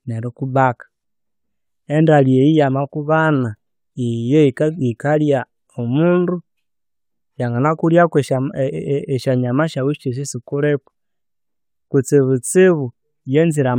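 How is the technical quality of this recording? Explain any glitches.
Nothing in the recording stood out as a technical problem on listening.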